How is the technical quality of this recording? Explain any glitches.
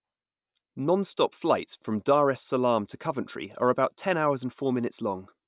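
No glitches or technical faults can be heard here.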